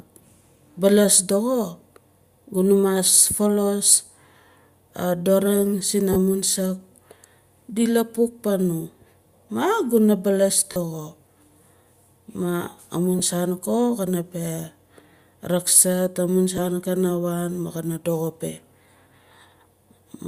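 Bluetooth LE Audio frames were lost in four places, and each time the LC3 decoder filled the gap by replaying the last spectrum with randomised signs. The first gap runs 6.13 to 6.16 s, right after "a doring", and lasts about 30 ms. The second runs 10.72 to 10.77 s and lasts about 40 ms. Two short ones follow: 10 ms at 13.19 s, and 10 ms at 16.57 s between "rakzart amun" and "kana waan". These lengths fit whole 10 ms frames. Each lost LE Audio frames gap sounds like a brief noisy smear in the speech rather than a hole, and none lasts long enough to fade toward silence. They sit on top of the faint grain of what is likely light LC3 compression.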